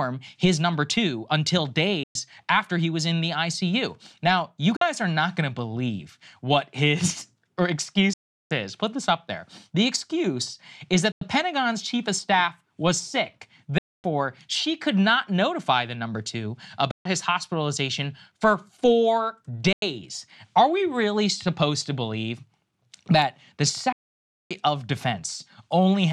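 At 2.03, 4.76, 8.13, 11.12, 13.78, 16.91, 19.73 and 23.92 s, the speech cuts to silence. The gaps last about 116, 46, 372, 93, 255, 139, 93 and 581 ms. The edges are abrupt or fade over a few milliseconds. Each time, the speech resumes further on, as if it had kept playing unheard. This is likely a Bluetooth dropout. Packets did not reach the headphones in time and were discarded. The gap lengths fit whole packets of roughly 23 ms.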